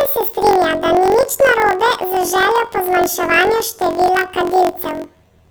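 From start to finish the speech has a robotic buzz at about 46 Hz. This is planar audio read as interleaved: each 21.77 ms block of left-then-right samples is read as alternating pairs. The block plays twice, an octave fast, but with blocks this short there is no clear octave shift.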